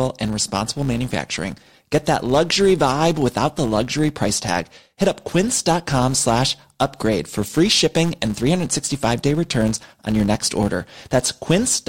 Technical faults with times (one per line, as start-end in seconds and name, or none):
0.00-11.88 hard clipping
0.00-11.88 filter restarted on every block